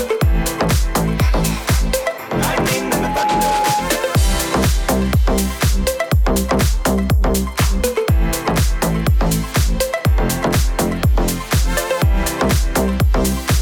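Loudspeaker feedback squeal from 2.78 to 3.94 s: the microphone re-amplifies its own loudspeaker, so an 838 Hz tone swells over about half a second to roughly the sound's level.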